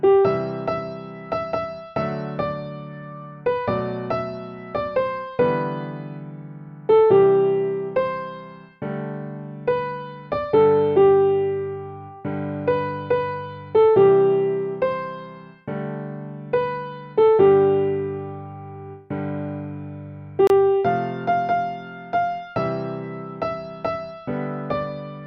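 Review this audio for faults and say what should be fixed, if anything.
Two separately encoded pieces were joined without trimming the encoder's start-up delay and last-frame padding, leaving a gap at a join of encoded pieces. From 20.47 to 20.50 s, continuous sound drops into a roughly 27 ms gap, edges smeared, then resumes where it stopped. To prevent it, encode the material as one continuous stream, or trim each piece's delay and padding before joining.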